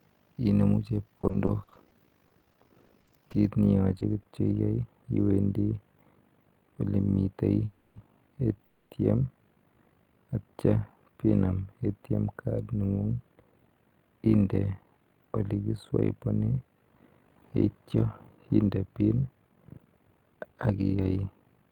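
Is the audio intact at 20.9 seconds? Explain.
No. Three faults overlap at that moment.

Overlap-add ripple runs through the whole clip. Frames were rejoined with an overlap that does not sum to a steady gain. The level swings by about 11 dB around 50 times a second. That gives the speech a rough, fast flutter.

Channel delay (comb filtering) runs from 3.49 s to the end. One channel lags the other by only a few samples, about a tenth of a millisecond. The mono sum cancels at evenly spaced frequencies, starting around 5 kHz. The speech sounds hollow and phasey.

A jitter buffer speed-up runs from 19.36 s to 21.13 s. Excess buffered audio was trimmed by removing short pitch-period pieces again and again. About a fifth of a second was taken out in total. Speech runs at 113% speed with unchanged pitch and sounds hurried.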